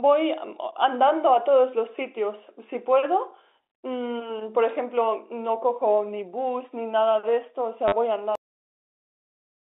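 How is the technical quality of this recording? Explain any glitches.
The recording has two clear glitches: a brief robotic stutter late in the speech and an abrupt cut-off before the end. Both sit within the narrow telephone band, roughly 250 Hz to 3.7 kHz, of the G.711 line.

At 7.88 to 7.92 s, the speech briefly stutters with a mechanical buzz. This is packet loss with the last packet repeated: about 40 ms of audio went missing, and the receiver replayed its last packet until new data arrived. That fits four 10 ms packets, giving a roughly 100 Hz buzz.

At 8.35 s, the speech stops mid-sound and drops straight into digital silence, with no natural decay, for the remainder. This is a cut-off end: the final buffers were never written or played out, so the audio simply ends where the data stopped.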